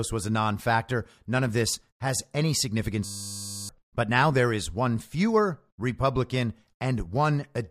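At 3.05 s, after "of this has any", the driver froze and the hardware kept replaying one 10 ms buffer until 3.69 s. This system hang loop sounds like a steady 100 Hz buzz and loses about 0.7 s. The waveform repeats identically, and the spectrogram shows flat lines 100 Hz apart.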